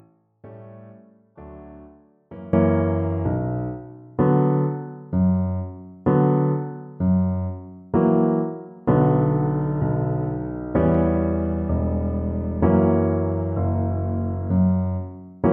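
From the start to 2.53 s, the sound collapses in level by about 23 dB when heard in mono. What remains is faint, as if the solid centre has been hollowed out. The likely cause is one channel inverted, with one stereo side carrying reversed polarity. Summing the two sides then cancels everything they share. Only their small differences survive. After 2.53 s the full level returns.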